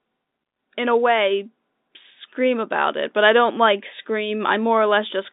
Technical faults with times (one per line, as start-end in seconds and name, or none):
none